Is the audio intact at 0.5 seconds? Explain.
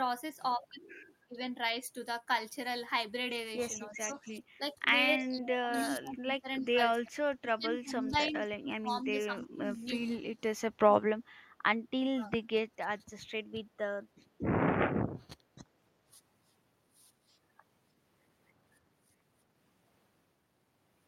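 Yes, the speech at 0.5 seconds is intact, with no audible fault at that moment.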